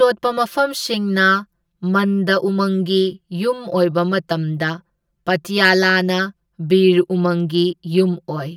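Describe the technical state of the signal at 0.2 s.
At 0.2 s the speech has channel delay (comb filtering) throughout: one channel lags by about 5 ms, so the mono sum cancels at evenly spaced frequencies from near 100 Hz. The result is a hollow, phasey sound whose notches stay fixed rather than sweeping like a phaser.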